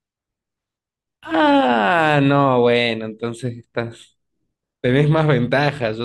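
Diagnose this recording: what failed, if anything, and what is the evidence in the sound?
Nothing failed; no faults heard.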